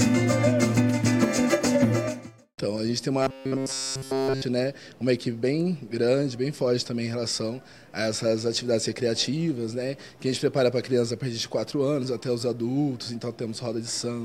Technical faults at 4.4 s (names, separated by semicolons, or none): robotic sound from repeated short buffers